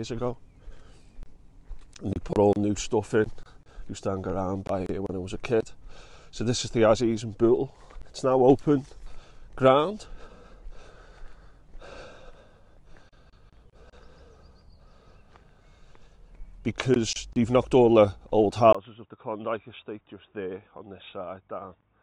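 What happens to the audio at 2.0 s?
Nothing goes wrong at 2.0 s: the audio plays through that moment intact, with no dropout, click or distortion to be heard.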